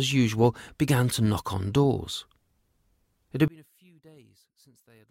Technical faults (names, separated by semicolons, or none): one channel inverted